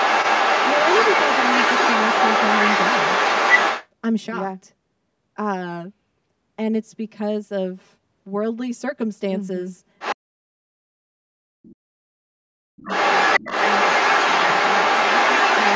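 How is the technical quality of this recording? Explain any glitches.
Technical quality is poor. The clip is speech, a hollow comb-filter coloration runs through all of it, and call echo-cancellation trouble affects the start, the middle and the end.

Channel delay (comb filtering) is present throughout. One channel trails the other by roughly 5 ms, and the two are summed to mono. Shared content cancels at evenly spaced frequencies starting near 100 Hz, so the speech sounds hollow and phasey. A spectrogram shows fixed horizontal notch stripes about 200 Hz apart.

The other side's voice leaking through occurs from 0 to 3.88 s, from 9.99 to 10.15 s, at 11.63 to 11.71 s, and from 12.8 s to the end. A second voice is audible, likely loudspeaker echo the canceller left behind. It sits about 5 dB above the talker at the start and end, level with the talker near 10 s, and about 25 dB down near 11.7 s. 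A spectrogram shows overlapping, unrelated harmonic patterns.

Speech suppressed in double talk occurs from 10.14 to 11.15 s and from 11.33 to 12.81 s. The talker's voice dips by as much as about 40 dB, likely because the canceller turned everything down while both sides spoke. The waveform shows sudden envelope collapses.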